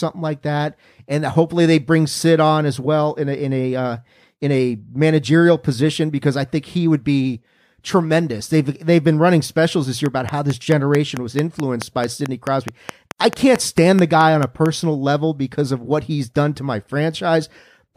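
Right after "running specials this year", at 10.06 s, a train of clicks starts and runs until 14.67 s, just before "level because of what". The clicks come at a steady 4.6 per second, around twenty in all. Each pulse has much the same sharp shape. They stand roughly 10 dB above the speech, so they tick through the talking and the pauses alike. The likely cause is electrical interference or a faulty connection or power supply.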